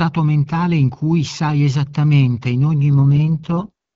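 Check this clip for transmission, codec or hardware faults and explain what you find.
One transmission fault is audible in this speech clip: an AMR rate drop. From 2.92 to 3.72 s, just after "sai esattamente in ogni", the speech turns rough, raspy and synthetic, with no gap and no narrowing of the band. The network has switched the AMR-WB codec to a lower rate after a weak radio link, spending bits on error protection instead of on the speech. The raspiness fits a step down from HD Voice at 12.65 kbit/s to 6.6 kbit/s, one of its two lowest rates.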